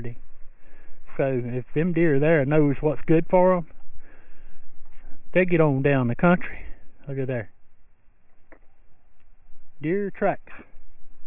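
From start to finish the audio carries aliasing. The sound was brought down to a low rate without a proper anti-alias filter, which fits a drop to a 6 kHz rate. Everything that was above 3 kHz folds back below that line as unrelated, inharmonic tones, heard as gritty, metallic hash on bright sounds at roughly 25 dB below the main signal. A spectrogram shows energy running hard up to a 3 kHz ceiling, with mirrored, wrongly pitched traces beneath it.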